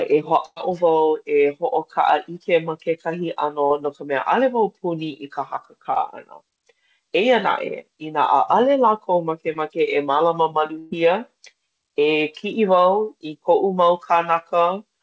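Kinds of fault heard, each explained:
Burst of packet loss: Around 0.46 to 0.58 s and 10.79 to 10.93 s, about 100 ms and then 120 ms of speech never arrived. The receiver stretched the last sound into a fading buzz or hiss, and the first gap ends in about 40 ms of silence before speech resumes further on. On a spectrogram, frozen, smeared harmonics fade out. The waveform shows a decaying repetitive stretch, then a flat gap in the first case.
Short concealed packet loss: At 3.66 to 3.72 s, 5.94 to 5.98 s and 9.54 to 9.57 s, about 40 ms, 20 ms and 20 ms went missing. The decoder bridged each hole by continuing the preceding sound and blending back into real audio. The result is a brief smear or wobble, and a quick consonant can disappear. A spectrogram shows short horizontal streaks where the harmonics hold still. The waveform shows a small, overly regular patch.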